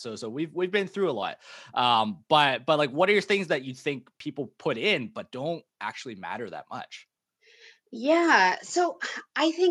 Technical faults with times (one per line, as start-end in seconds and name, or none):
1.22 audio missing between chunks
4.20 audio missing between chunks